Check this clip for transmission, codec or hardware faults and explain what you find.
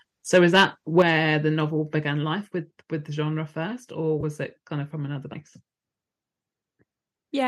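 Three kinds of fault are audible: clipping on two early peaks, two sudden level drops, and one brief dropout patch.

Microphone overload, likely from input gain set too high, hits 0.34 to 0.64 s, peaking about 6 dB over full scale, and again at 0.98 to 1.02 s, about 3 dB over, just before "the novel". Waveform tops are sheared flat at the converter limit, adding a harsh crackle. Unlike codec roughness, the distortion tracks only the loudest moments.

Microphone volume stepped down twice, likely the call software cutting input gain after those overloads. At 1.02 s, right before "the novel", the level falls by about 6 dB. At 2.04 s, between "the novel" and "life with with the", it falls by about 3 dB more. Voice and background drop together in one instant step, which sets this apart from a speaker turning away or a gradual fade.

AAC frame loss with concealment occurs at 4.21 to 4.24 s, a gap of 20 ms, which fits two lost 10 ms frames. 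The decoder fills the gap from the last good spectrum, leaving a short smeared, noisy or phasey blip rather than a clean silence or a click. The surrounding coding, likely low-delay AAC, adds only light graininess.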